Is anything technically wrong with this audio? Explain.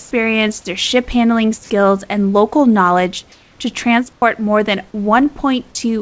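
Yes. Two related faults can be heard in this speech clip.

Comfort noise replaces the real background three times: from 0 to 0.11 s, just before "their ship handling skills"; from 3.32 to 3.59 s, after "skills and local knowledge"; and from 4.13 to 4.22 s. The likely cause is discontinuous transmission. The sender stopped sending during pauses, and the receiver filled them with synthetic noise. The room's real background becomes a smoother synthetic noise. It is about 3 dB louder in the first gap, about 1 dB quieter in the second, and about 11 dB quieter in the third.

An onset clipped by the voice detector follows at 4.20 to 4.22 s, between "and local knowledge to" and "more than". The detector was likely slow to register that speech had resumed. About 20 ms of the onset was never sent, and comfort noise filled the space. The next word therefore begins abruptly and has lost its soft start. 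Throughout the clip, nothing is heard above 8 kHz, which fits a wideband call codec.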